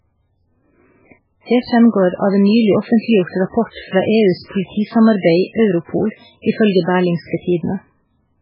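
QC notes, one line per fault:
Throughout: MP3 compression, likely at a bitrate near 8 kbps. The speech is heavily damaged: nothing above 5.3 kHz, dulled s sounds, and a watery swirl as weak frequency lines flicker between frames. The spectrogram shows a flat ceiling at 5.3 kHz with patchy, blinking speckle beneath.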